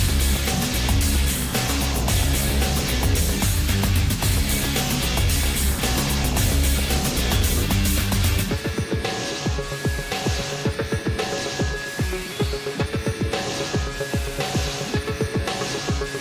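No technical faults can be heard anywhere in this audio. Nothing in the signal stands out as a problem at any point.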